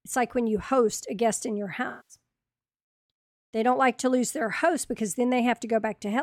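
Right after "a guest in your", from 1.88 to 2.16 s, there's AAC frame loss with concealment: the decoder papers over the gap by reusing the last good spectrum, leaving a smeared, noisy stretch.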